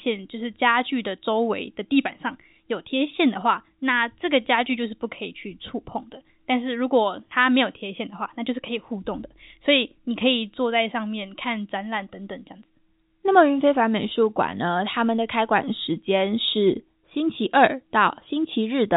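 No technical faults can be heard in this speech recording, which has the narrow band of G.711 telephone coding, with nothing above 3.8 kHz.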